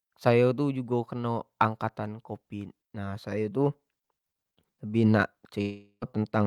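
Speech, interrupted by what is likely a long network dropout from 5.61 to 6.04 s. About 0.4 s of audio never arrived, so the receiver extended the last sound as a fading buzz or hiss, leaving 80 ms of silence before speech resumes with that stretch missing.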